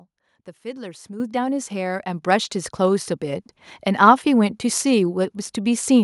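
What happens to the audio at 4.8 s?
Nothing goes wrong at 4.8 s; the speech carries on intact through that moment, with no dropout, click or distortion.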